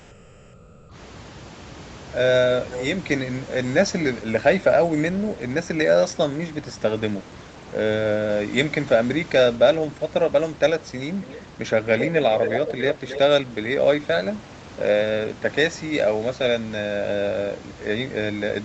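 Speech recording in which the first 0.85 s of background is a steady, featureless hiss, about 5 dB quieter than the room noise that follows and sitting about 26 dB below the loudest speech, so the real ambience is audibly swapped out at the start. That is comfort noise in place of the background, most likely from Opus discontinuous transmission: the sender stopped coding during the pause, and the receiver filled it with synthetic noise roughly matched to the room. Later, a delayed second copy of the talker appears 270 ms behind the direct sound, first as a faint trace well below the speech from 11.2 to 11.48 s, then nearly as loud as the speech itself from 11.98 to 13.19 s. This is an echo leak, likely from a far end playing the call over a loudspeaker, where the echo canceller failed to remove what its microphone picked up and sent it back.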